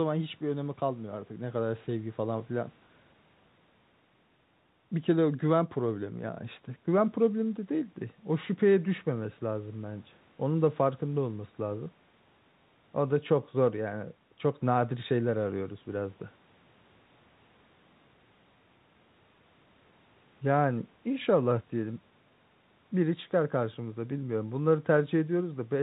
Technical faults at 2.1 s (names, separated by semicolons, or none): none